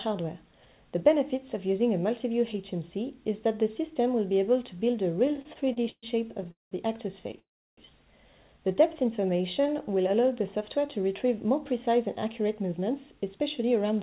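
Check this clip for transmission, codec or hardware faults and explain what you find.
The clip has four kinds of network fault: two stretches of stutter, one freeze, a slow-down and a speed-up. All of it passed through a narrowband call path with nothing above 4 kHz, which fits G.711 mu-law at 64 kbps.

Repeated stalls (stutter) occur from 5.26 to 6.05 s and again from 6.41 to 6.73 s. Packets arrived late, so the jitter buffer kept running dry. The receiver stretched the last sound over each wait. The first stretch has 11 short gaps, the longest 130 ms. The second has 4 gaps, the longest 200 ms. Nothing is lost, but the audio stumbles and drags.

A call audio freeze runs from 7.39 to 7.79 s. The sound stops and about 330 ms of it is silent. Then the audio resumes exactly where it left off. The likely cause is packets held up in transit, emptying the jitter buffer. The receiver filled the gap, and the playback delay grew by 382 ms. 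Nothing is skipped. A pause has been inserted.

A jitter buffer slow-down runs from 8.68 to 10.33 s. The buffer needed a bigger reserve. So the receiver repeated single pitch periods and bits of pauses many times over. This added 153 ms, and playback runs at 91% speed. The pitch stays the same. Sounds come out drawn-out, with a faint warble in places.

A jitter buffer speed-up runs from 12.25 s to the end. The buffer held more audio than it aims for. The receiver trimmed short pitch-period pieces again and again. Roughly a tenth of a second is cut, and playback runs at 106% speed. The pitch is unchanged. The audio sounds slightly hurried.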